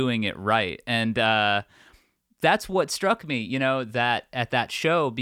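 Nothing technical goes wrong anywhere in this bit of speech, so there's no fault to point to.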